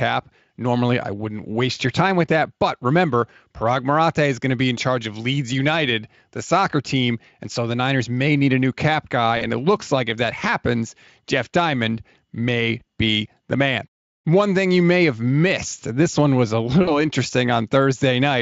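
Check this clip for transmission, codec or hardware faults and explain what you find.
Packet loss concealed by the speech codec occurs three times: at 9.37 to 9.44 s and 16.83 to 17.00 s, gaps of about 40 ms that fit two lost 20 ms frames, and at 12.79 to 12.83 s, about 20 ms. The decoder extrapolates the last pitch and filter with falling gain, so the speech smears into a brief buzzy tone or coloured noise that fades. The voice stays weak or distorted beyond each gap because each frame builds on the last. The Speex coding itself leaves little or no audible damage.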